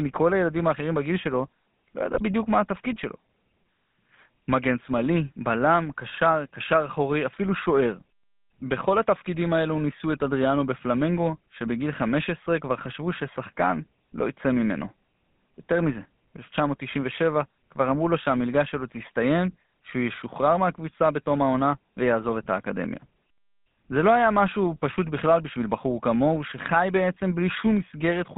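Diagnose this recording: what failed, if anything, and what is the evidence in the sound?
The fault is in the codec stage: GSM full-rate codec damage runs through the whole clip. The speech has a buzzy, gravelly edge from start to end. The band sits between about 150 Hz and 3.6 kHz, with nothing above. The coder keeps a vocal-tract filter and drives it with sparse, regular pulses. That coarse excitation causes the roughness. The sound fits a 13 kbps full-rate link.

The second fault is in the network stage. GSM bit errors hit from 2.14 to 2.24 s. The speech briefly breaks into a squawk and gargle, then recovers. The burst lasts about 94 ms, which points to roughly five damaged 20 ms frames. Flipped bits reached the decoder and corrupted its filter, pitch or gain values. The spectrum bends or the level jumps for those frames.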